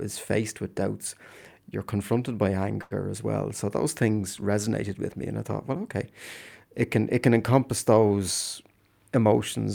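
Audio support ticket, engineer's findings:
Short stall from a late packet, 2.81–2.93 s: sound held about 93 ms, slight buzz or dip. Jitter buffer ran dry, receiver stretched the last bit, nothing lost, delay up 93 ms.

Jitter buffer speed-up, 8.62–9.23 s: speech hurried at 113% speed, same pitch. Receiver trimmed pitch-period chunks, about a tenth of a second total, to cut excess buffered delay.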